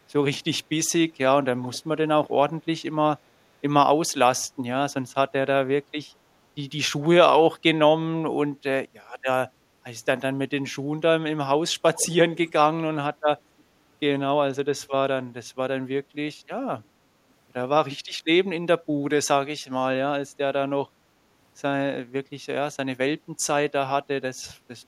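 At 1.62–1.79 s, 11.95–12.12 s and 12.36–12.53 s, a brief echo leak returns the speech 379 ms late, faint and well below the direct sound. This is likely residue passed by a far-end echo canceller. Spectrograms show weaker, time-shifted copies of the harmonic bands.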